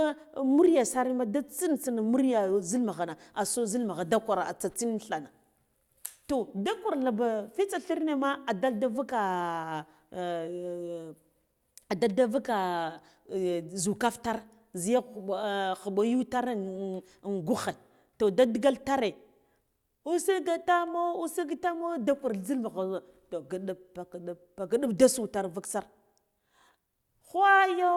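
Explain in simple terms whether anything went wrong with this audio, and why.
Listening through the speech recording, nothing went wrong that could be heard, and no moment stood out as a problem.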